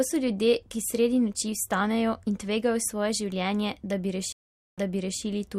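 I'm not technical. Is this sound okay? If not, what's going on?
No. At about 4.32 seconds the speech suddenly drops out for roughly half a second (0.45 s). When it comes back, a short stretch of the speech repeats, because playback has jumped back about 0.44 seconds. This is a stream reconnect: the connection briefly broke, the player went quiet, reconnected and started decoding again partway through. The server resent a little audio it had already delivered, causing the repeat. The disruption settles by about 5.22 seconds.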